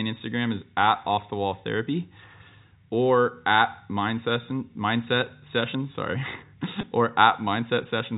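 A speech recording carried over G.711 telephone coding, band-limited at 4 kHz, has a brief buzzy, held sound from 6.81 to 6.83 s. That is packet loss with pitch repetition: about 20 ms of audio, likely two small packets, was bridged by repeating the last pitch period.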